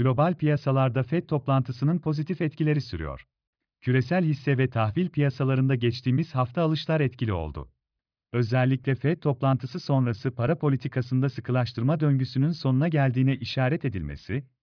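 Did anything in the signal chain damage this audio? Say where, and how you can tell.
No, nothing in the signal chain audibly damaged this speech recording. Listening closely turns up no sign of trouble at any stage between capture and playback.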